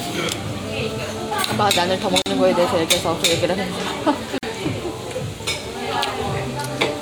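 The audio was encoded in separate pieces and joined without trimming each encoder's start-up delay and last-frame padding, which leaves a gap at each join of encoded pieces. Continuous sound drops to silence twice: at 2.22 s for 42 ms and at 4.38 s for 48 ms. Both silences have edges smeared by the codec, and after each one the sound resumes exactly where it broke off.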